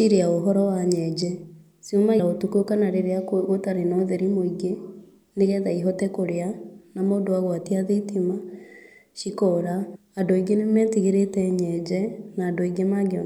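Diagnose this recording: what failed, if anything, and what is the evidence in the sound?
The codec stage skipped compressed frames at 2.18 s and 9.94 s. The speech jumps ahead by roughly 150 ms, then about 300 ms, which fits around five and ten missing 26.1 ms frames. Overlapping frames smear each join into a brief blip, not a click.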